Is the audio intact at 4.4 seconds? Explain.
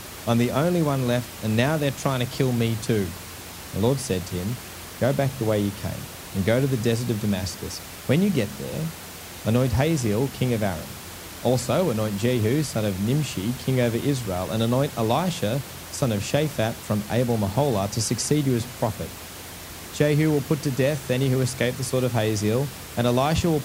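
Yes, the speech at 4.4 seconds is intact, with only the room's own background noise audible well beneath it, about 15 dB below the speech.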